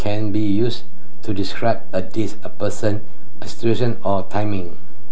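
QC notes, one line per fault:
Throughout: DC offset. The signal chain is adding a constant voltage, so the entire speech waveform rides on a fixed shift of about -10 dBFS instead of centring on zero. The offset itself is inaudible, but it permanently eats a large slice of headroom, so peaks on the shifted side will clip sooner than their level suggests. On an analyser it appears as steady energy at 0 Hz, beneath all the speech content.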